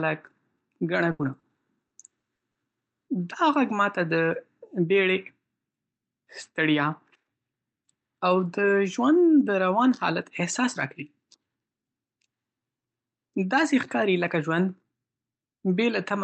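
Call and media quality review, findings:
Burst of packet loss, 1.11 to 1.22 s: last sound held and fading out, then speech jumps ahead with about 80 ms missing. Jitter buffer/decoder ran out of packets; concealment extended the last sound and attenuated it until real audio returned.

Short concealed packet loss, 1.39 to 1.46 s: brief smear in the speech, about 40 ms. A few packets arrived too late for the decoder; the gap was patched by continuing the previous sound, then crossfaded back into received audio.

Repeated packet loss (robotic sound), 1.87 to 2.58 s: choppy speech with pieces missing. Four separate gaps, the longest 40 ms, 160 ms in total, roughly a quarter of the stretch concealed. Repeated late or lost packets, each patched by extrapolation. High end rolls off near 8 kHz, consistent with Opus at moderate bitrate.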